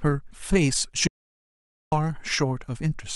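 At 0.30 s the speech is interrupted by a brief glitch, the sign of damaged data in a compressed stream. A few bytes in the encoded file were corrupted or lost there, so the decoder could not interpret those frames correctly, lost sync and scanned forward for the next valid frame header. That resynchronisation shows up as a short disruption in the speech.

From 1.07 s to 1.92 s there is an audio dropout to silence lasting about 0.85 s. The speech cuts off mid-flow, and the gap is silent with no room tone at all. The sound then resumes abruptly partway through. This pattern is likely caused by the input signal being lost while the recorder kept writing silence, so whatever was spoken during that stretch is not recoverable.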